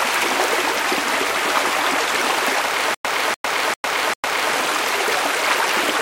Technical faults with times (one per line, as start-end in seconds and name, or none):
2.94-4.53 stutter with silent gaps